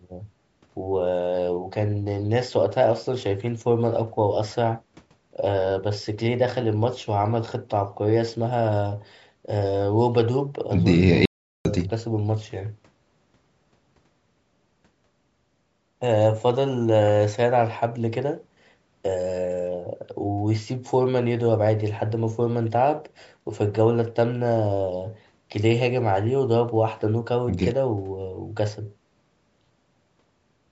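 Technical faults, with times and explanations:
11.25 to 11.65 s, audio dropout to silence: the speech cuts off mid-flow for about 0.4 s with no room tone and then resumes abruptly, likely because the input link failed briefly while recording kept writing zeros. The waveform shows a flat line, and the spectrogram a blank vertical band.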